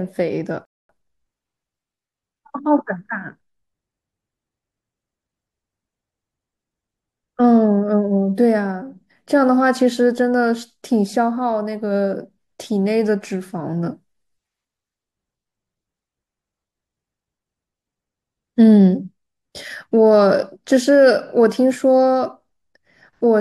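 At 0.65 s the speech cuts to silence. This is a rebuffering stall. The player used up its downloaded audio and had to wait for more data. The gap lasts until 0.89 s, about 240 ms. Then the speech resumes from exactly the point where it stopped. No audio is skipped or repeated. The stall only inserts dead air, so the clip runs 240 ms longer than the original.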